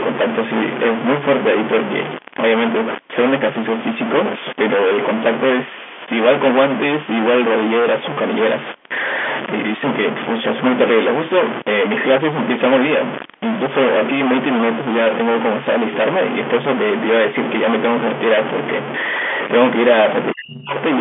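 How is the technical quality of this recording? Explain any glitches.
The recording has two faults, one continuous and one brief. Throughout the clip, a distortion sits on the speech, and the pauses fill with noise instead of going quiet. This is likely a stuck bit: one data bit is held at a fixed value, so about half the samples are off by that bit's weight. Because the bit also flips with the sign of small values, the pauses fill with noise.

From 20.33 to 20.75 s, the speech sinks by around 40 dB at its deepest for about four tenths of a second. The likely cause is speech suppressed in double talk: both sides spoke at once, the echo canceller could not separate this talker from loudspeaker echo, and it turned the speech down.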